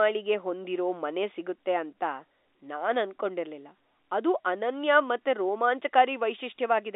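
No technical faults are audible.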